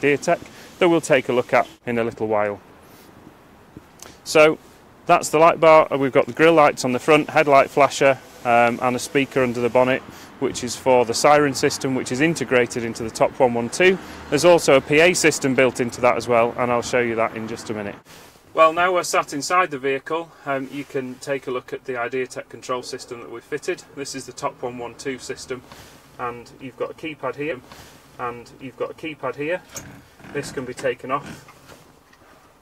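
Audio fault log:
27.51–29.51 s: stream segment repeated. The player fetched or queued the same two-second segment twice, so playback jumps back and those two seconds of audio play again, adding 2 s to the running time, with a small blip at the join where the repeat begins.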